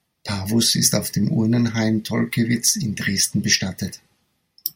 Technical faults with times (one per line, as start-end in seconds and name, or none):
none